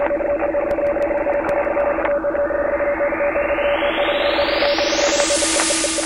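From 0.56 to 1.80 s, nine CD scratch ticks sound at a steady rate of about seven per second. A blemish on the disc spoils more data than error correction can rebuild, once each turn. The player patches or mutes those samples, leaving clicks a couple of milliseconds long.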